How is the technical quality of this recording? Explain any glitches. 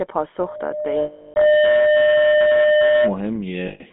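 Technical quality is poor: the whole recording carries a plainly audible low-rate codec sound, a feedback tone runs through most of it, and the audio breaks up twice.

GSM full-rate codec, throughout: the audio is confined to roughly 200 Hz to 3.5 kHz, and the coder rebuilds speech from a vocal-tract model excited by sparse regular pulses. That plainly audible damage comes across as buzzy, gravelly roughness, consistent with a 13 kbps full-rate link.

Loudspeaker feedback squeal, 0.38 to 3.18 s: a microphone is picking up its own loudspeaker, and at 604 Hz the loop gain exceeds unity. The tone swells over about a second to roughly 5 dB above the speech, a steady whistle sitting over the talker.

Lost GSM frames, 1.02 to 1.37 s and 3.68 to 3.82 s: the decoder covered missing frames by repeating the last good parameters. The 340 ms gap, which points to about 17 frames, rings metallically, and the 120 ms gap is a briefer rough smear.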